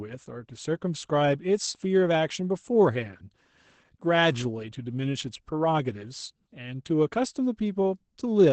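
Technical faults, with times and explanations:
Throughout, Opus voice compression: the speech sounds muffled and hoarse, with a faintly robotic edge. Nothing is heard above about 8.6 kHz, so sibilants and breath lack their top. The damage is plainly audible and fits Opus running in its SILK linear-prediction mode at wideband and a low bitrate around 12 kbps. The band is narrowed, and the voice excitation is coded coarsely in 20 ms frames, which roughens the tone.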